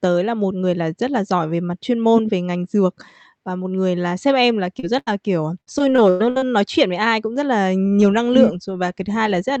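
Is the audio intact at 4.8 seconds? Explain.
No. Just after "là sếp em là", from 4.79 to 4.85 s, there is short concealed packet loss. About 40 ms of audio arrived too late, and the decoder papered over it by extending the preceding sound before blending back. The result is a brief smear rather than the silent gap or click a hard dropout would leave.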